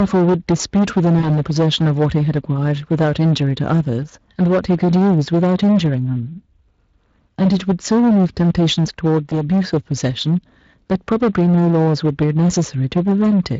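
From the first moment to the end, hard clipping flattens the peaks: the level overdrives the stage by about 11 dB, so a large share of the waveform, roughly one sample in seven, is sliced off. Because so much is cut, this is a continuous harsh fuzz on every loud syllable rather than the isolated crackles of light overload.

Running through the whole clip as well is Speex codec damage, plainly audible. The sound is hoarse and grainy, which fits a Speex stream near 20 kbps. Unlike the clipping's fuzz, which follows loudness, this roughness stays present at every level.

At 1.19 to 1.28 s comes VoIP packet loss concealed by the speech codec. The decoder stretches its last pitch and filter into a fading sound, and the sound stays thin for a while after. The 40 ms gap points to two lost frames. A gap filled with silence would just drop out, while this one is filled in by the decoder.

A shorter concealed packet loss follows at 9.29 to 9.34 s. 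It is one 20 ms frame, heard as a brief smear.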